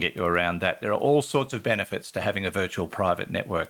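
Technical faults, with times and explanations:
Nothing has gone wrong in this speech recording; the only other sound is the room's own quiet background, about 37 dB below the speech, which belongs to the recording itself.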